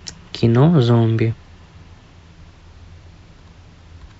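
At 1.32 s the speech lurches forward with a short, smeared blip rather than a sharp click, as if a sliver of the sentence were simply missing. This is compressed frames skipped: the decoder never played a run of encoded frames, so the audio jumps ahead by roughly 70 ms, which fits about three frames of 26.1 ms each. Because adjacent frames overlap, the seam is softened into a brief smear instead of a hard edge.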